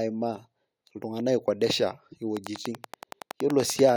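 From 2.37 to 3.90 s, a train of clicks sits over the speech. About fifteen near-identical pulses arrive evenly, 10.5 per second. They peak about 15 dB above the speech and keep ticking through pauses. Likely interference from nearby equipment or a faulty connection or power supply.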